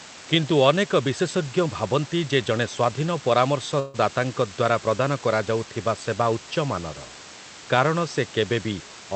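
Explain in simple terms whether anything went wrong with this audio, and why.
Two things went wrong. The first runs through the whole clip: a steady, even hiss sitting not far below the speech, with no crunchy distortion. That's low bit depth with dither. The audio is stored with very few levels of loudness, which fits about 6 bits. Rounding that coarsely would normally sound gritty, so a little random noise is mixed in first, and the grit turns into this constant hiss instead.

The second is a call audio freeze from 3.79 to 3.96 s. For about 0.15 s the sound stops moving forward and the last bit is stretched out as a fading buzz or hiss instead of going silent. The likely cause is packets arriving late on the call connection, so the receiver ran out of audio to play and filled the wait. Afterwards the speech picks up exactly where it left off, so nothing is lost, but everything after that point arrives about 0.15 s later. 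The call connection itself behaves as expected, with its usual slightly muffled top end.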